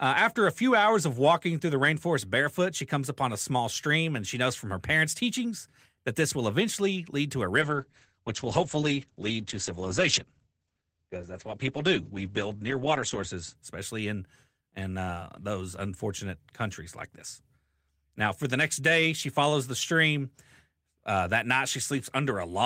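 A call bitrate drop hits this speech clip from 7.63 to 13.61 s, bottoming out for about 5.6 s. Starved of bits, the encoder codes coarsely and narrows the audio band from 20 kHz to 8 kHz, leaving speech muffled and rough, consistent with roughly 32 falling to 9 kbps.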